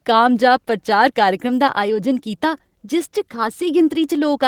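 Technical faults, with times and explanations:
Nothing to flag here, as the speech carries on without any technical hiccup worth pointing out.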